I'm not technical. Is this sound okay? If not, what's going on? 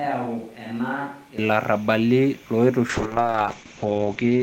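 No. From the very start until about 1.38 s, the sound is hollow, roomy, thinner and noticeably quieter, with more background hiss. That is likely a switch to a distant microphone. Unlike a poor connection, it adds room echo and room noise rather than graininess.

From 2.9 s to the end, there is a call bitrate drop. The connection squeezed the sound into far less data, so it turns rough, watery and dull, with the crisp top end missing. It stays at its worst for about the last 1.2 s. Here the sound itself gets coarse, with no added echo.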